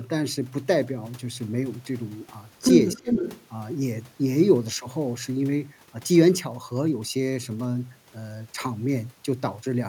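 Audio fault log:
2.95 to 3.17 s, speech suppressed in double talk: with both sides likely talking at once, the echo canceller could not separate the local talker from loudspeaker echo and turned everything down. The sound dips deeply, by about 20 dB, for around 150 ms in pieces.
2.98 to 3.45 s, echo leak: the far end's echo canceller likely failed to remove all of what its microphone picked up from its loudspeaker, sending it back. A copy of the speech trails 295 ms behind, only a few dB quieter than the original.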